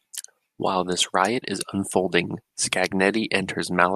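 Nothing goes wrong in this bit of speech; there's no technical fault to point to anywhere in it.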